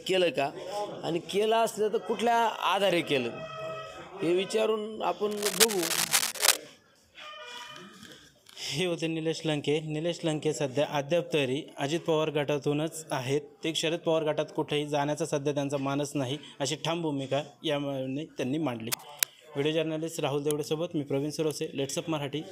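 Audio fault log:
5.31–6.57 s and 18.91–19.24 s, cable scratch noise: dense, uneven bursts of scratching and rustling sit over the sound, roughly as loud as the signal, for about 1.3 s and then about 0.3 s. A worn cable, connector or control being moved is the likely cause, its contact resistance jumping rapidly.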